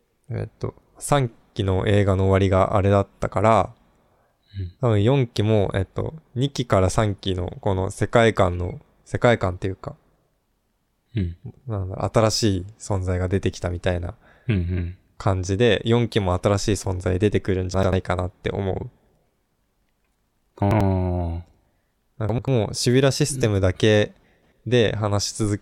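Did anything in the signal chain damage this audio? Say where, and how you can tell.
Yes, chunks out of order at the buffer stage: jumbled moments at 17.74–17.93, 20.62–20.81, 22.29–22.48 and 24.24–24.52 s, where roughly 93 ms blocks play one or two slots late.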